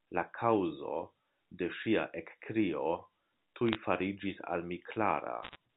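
A speech recording over a G.711 A-law phone line has bit errors on a digital phone line at 3.67–3.75 s, just before "fariĝis al", and 5.43–5.56 s. Flipped sign and high-order bits turn single samples into sharp ticks and crackle, seen as isolated waveform spikes and thin full-height vertical spectrogram lines.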